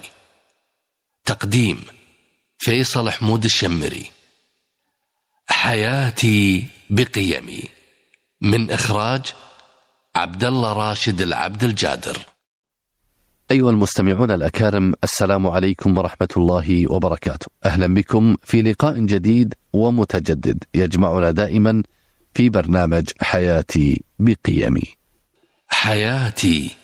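Gain pumping runs throughout, with the level swinging by around 15 dB, so loud and soft parts sit squashed together. The likely cause is input gain set far too high, with a fast limiter clamping down on every peak.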